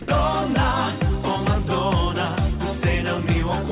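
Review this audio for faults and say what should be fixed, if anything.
Right at the start, from 0.02 to 0.08 s, about 60 ms of the sound gives way to flat, steady noise, and roughly 30 ms of real onset goes missing. That's likely sound dropped by the voice detector: it judged the quiet opening as background and sent comfort noise instead, on a call path that carries nothing above 4 kHz. To fix it, add a short hangover and pre-roll to the detector, or turn voice detection off.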